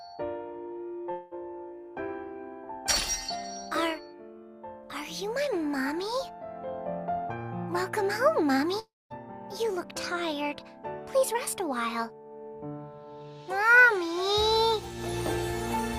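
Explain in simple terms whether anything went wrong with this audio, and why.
Two gaps show up, at 1.11 to 1.34 s and at 8.79 to 9.13 s. In each, the sound smears into a fading buzz, and at the second one it drops to near silence for about 0.2 s before returning. These are long network dropouts, likely caused by audio packets that never arrived. The player stretched out the last sound to cover the hole, so about 0.2 s and 0.3 s of the original audio are simply missing.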